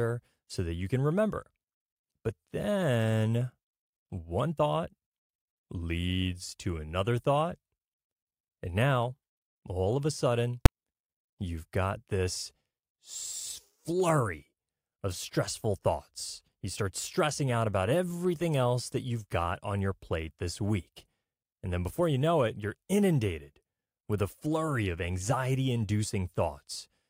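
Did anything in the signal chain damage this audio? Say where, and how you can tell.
Yes. At 10.66 s, just after "all of a sudden", there is a single sharp bang from invalid numbers at full scale. A processing stage produced infinite or invalid values over a block of about 5 ms, and conversion clamped them to maximum amplitude.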